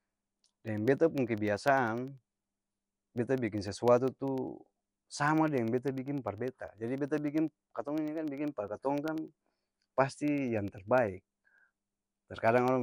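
From start to finish the speech carries a rough, hissy halo and a smeared, underwater quality, with nothing above about 10.6 kHz. This is likely Nellymoser compression, which codes short blocks with few bits and fills the weakest bands with noise, and it fits a rate near 44 kbps.

From 0.08 s to 12.68 s, a tick sounds every 0.1 s while there is signal. These are periodic USB or driver dropouts. Something blocks the audio path at a fixed interval and a tiny sliver of sound, well under a millisecond, is replaced by silence each time.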